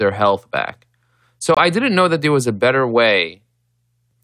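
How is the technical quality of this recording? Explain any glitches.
The recording has one clear glitch, a brief dropout in the speech.

Corrupt frame muted, from 1.54 to 1.59 s, just before "didn't know that there": some compressed frames arrived with flipped bits, the decoder rejected them, and the player filled their slot with silence. The speech cuts out abruptly into a gap of roughly 40 ms, a length that fits two lost frames. The timing is preserved, so the following words resume exactly on schedule with no drift.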